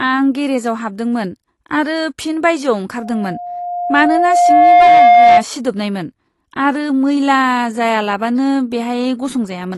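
Throughout, the speech stops at 12 kHz and sounds plainly smeared, likely AAC compression near 32 kbps, which warbles in a way a clean low-pass filter would not.

From 2.98 to 5.44 s, a loudspeaker feedback squeal swells over about two seconds into one 706 Hz tone about 10 dB above the speech, unlike steady mains hum.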